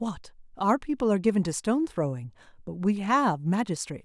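A short speech clip with nothing technically wrong with it.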